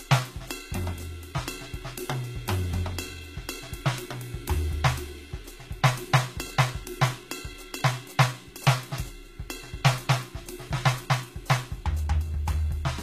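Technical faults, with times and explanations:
Throughout, HE-AAC compression: the music carries plainly audible codec damage, with treble reaching up to 14.9 kHz and nothing above it, yet that top band sounds synthetic rather than original. This likely comes from HE-AAC at a bitrate around 20 kbps, where only the lower spectrum is coded and the highs are regenerated from copied lower bands under a coarse envelope. A plain low-pass would simply lose the highs, and plain AAC would stop lower at such a rate.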